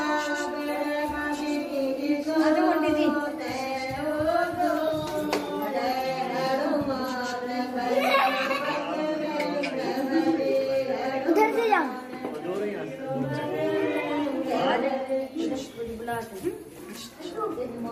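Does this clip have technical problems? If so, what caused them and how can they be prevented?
No, the signal holds steady throughout with no audible technical faults, so there is nothing here that needs preventing.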